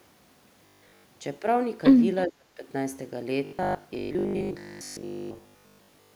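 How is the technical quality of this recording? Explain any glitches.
The recording has clear technical faults in two places, and one recurs.

From 0.66 to 1.04 s, and again from 3.45 to 6.15 s, the speech turns into a rigid, metallic buzz at 50 Hz: robotic sound from repeated short buffers. The likely cause is audio arriving late, with the last 20 ms looped to fill gaps. This happens throughout the first stretch and for most of the second.

From 2.27 to 2.64 s the speech is suppressed in double talk, dropping by about 30 dB. Likely an echo canceller confused by simultaneous talk from the far side, it attenuated the near talker along with the echo, leaving a dip in the speech.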